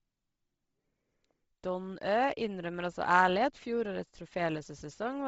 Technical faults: Bluetooth LC3 compression

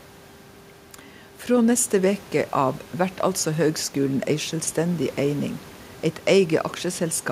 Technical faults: none

